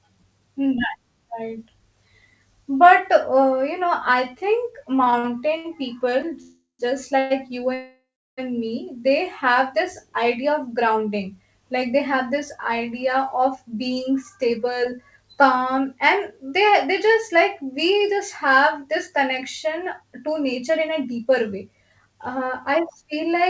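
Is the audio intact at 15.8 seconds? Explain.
No. Around 15.77 to 15.79 s, just before "and they they just", about 20 ms of the call arrived too late: a short concealed packet loss. Only a sliver was synthesised before the jitter buffer jumped ahead, cutting delay, so it sounds like a tiny tick or skip rather than a smeared, stretched-out fill.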